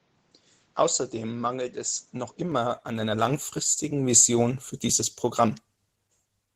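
From the start to 2.52 s the top of the band is missing, with nothing above 7.6 kHz, and the sound is duller and boxier than what follows. It clears at once, with no gap, just before "an einer langfristigen". The level barely changes, and a faint new noise floor sits roughly 40 dB down. This points to the input likely having been switched from a poorer device. A codec narrowing its band would follow the bitrate, not flip cleanly to a different tone at one moment.

Opus voice compression runs through the whole clip. The speech sounds plainly hoarse and slightly robotic, which fits a low rate around 16 kbps. The coder works in hybrid mode: linear prediction handles the band up to 8 kHz, and a coarser transform layer handles the full band above it, so the upper range is kept rather than cut away. Unlike the device switch, this damage is constant rather than confined to one stretch.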